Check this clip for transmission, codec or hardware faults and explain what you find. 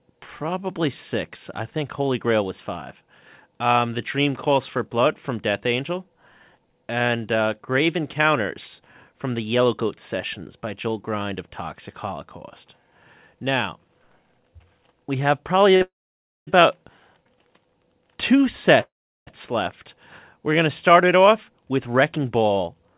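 Three kinds of network fault show up, all consistent with a narrowband call path whose audio stops at 4 kHz, which fits G.711 mu-law at 64 kbps.

At 15.76 s a sound is held about 43 ms too long with a slight buzz or dip. This is a short stall from a late packet: the jitter buffer ran dry, so the receiver stretched the last sound until the packet arrived.

From 15.82 to 16.49 s and 18.81 to 19.29 s the audio hangs in a fading buzz or hiss, then silence of about 570 ms and 370 ms. These are call audio freezes, likely from held-up packets emptying the jitter buffer. Speech resumes where it stopped, with nothing lost.

From 21.70 s to 22.97 s the speech sounds hurried at unchanged pitch, running at 111% speed. This is a jitter buffer speed-up: the receiver trimmed about 150 ms of pitch periods to reduce its backlog.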